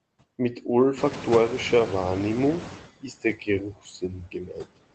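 Noise suppressor artifacts run through the whole clip. The suppressor pulls the steady background down by about 21 dB, frame by frame, in every band it judges to be noise. The residue is not a smooth floor. It pumps, sinking in the pauses and swelling back under the speech. The speech is heard through a call path limited to about 8 kHz.

At about 1.0 s the room noise jumps by roughly 18 dB. From 0.97 s to 2.88 s the noise suppressor is catching up. Its noise estimate still reflects the quieter room, so the louder background first comes through with only about 14 dB of reduction. It then settles lower over about 1.9 s as the estimate adapts. This is audible as a surge of noise that fades away gradually, not immediately.

Inside that surge, from 1.09 s to 1.15 s, is a lost packet rebuilt from error correction. The 40 ms span fits two lost 20 ms Opus packets. There is no dropout, because the decoder played the low-bitrate redundant copies carried in the following packets. 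Those frames sound briefly coarser and noisier than the surrounding speech, like a short grainy patch.

From 3.01 s to 4.77 s the speech is cut by the noise suppressor. With the background now loud and the suppressor working hard, parts of the speech are classed as noise and turned down along with it, by as much as about 21 dB at the deepest point. Roughly a second of speech in this stretch is affected in pieces. Soft consonants, word endings and quieter stretches sound swallowed or faint.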